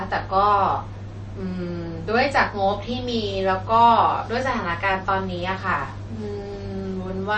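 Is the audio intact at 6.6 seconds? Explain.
No. At 6.6 seconds, as across the whole speech clip, the sound is watery and swirling, with nothing above 8.4 kHz. This is likely MP3 compression at a low bitrate, around 32 kbps. Starved of bits, the encoder cuts the treble and drops weak frequency lines that flicker between frames.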